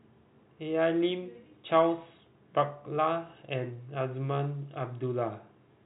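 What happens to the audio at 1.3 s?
Nothing goes wrong at 1.3 s; the speech carries on intact through that moment, with the narrow telephone band topping out around 3.8 kHz.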